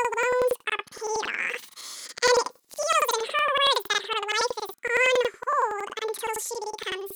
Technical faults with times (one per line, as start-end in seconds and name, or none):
0.00-7.16 planar audio read as interleaved